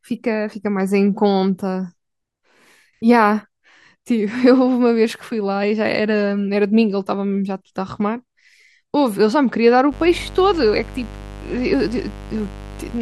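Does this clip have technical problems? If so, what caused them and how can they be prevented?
Yes. From 9.89 s to the end, a raspy mains buzz sits roughly 15 dB below the speech. Sharp switching spikes at twice the 50 Hz mains rate produce harmonics reaching several kilohertz. Prevent it with shielded, balanced cabling kept away from dimmers and rectifier supplies.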